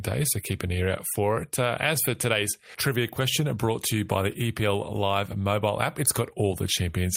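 A speech recording with no technical faults to point to, so there are no times or causes to give.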